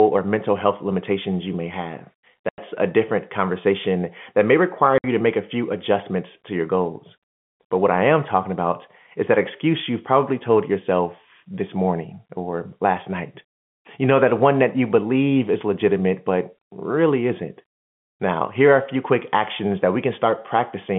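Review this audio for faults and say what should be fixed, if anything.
The speech drops abruptly into dead silence twice, at 2.49 to 2.58 s (90 ms) and at 4.98 to 5.04 s (60 ms), each gap with hard edges. This is packet loss filled with silence: the receiver played nothing where audio packets went missing, and both hole lengths fit a 30 ms packet size. The narrow band-limited sound of the G.711 telephone coding carries through around the gaps. Enable packet loss concealment at the receiver.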